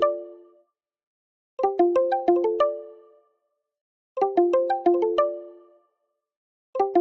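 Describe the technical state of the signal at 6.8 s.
At 6.8 s the signal is intact, with the call path's band-limiting to about 8 kHz and no fault present.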